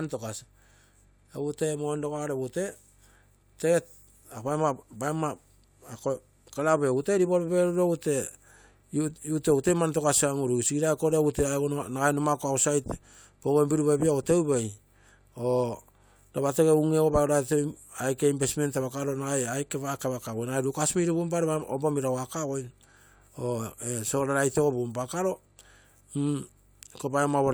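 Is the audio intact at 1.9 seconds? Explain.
Yes, the audio is intact at 1.9 seconds, with no fault at that moment.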